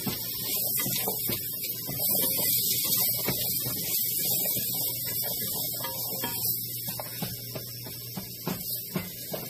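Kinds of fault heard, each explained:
Transcoding between lossy codecs: layered swirly, smeared artefacts run throughout, likely from a low-bitrate MP3, then Vorbis, then another MP3 pass. A spectrogram shows a flat ceiling at 15.2 kHz, with blotchy, holey upper bands beneath it.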